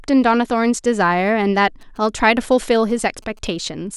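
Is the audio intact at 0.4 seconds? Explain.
Yes, the speech at 0.4 seconds is intact, with no audible fault at that moment.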